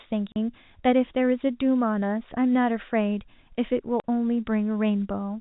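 Speech carried over a G.711 telephone path, band-limited below 4 kHz, is broken twice by packet loss filled with silence: from 0.32 to 0.36 s and again from 4.00 to 4.04 s, the signal drops to dead silence for 40 ms each time, which fits two consecutive 20 ms packets going missing. The receiver inserted zeros rather than concealing the gap, so each hole starts and ends abruptly.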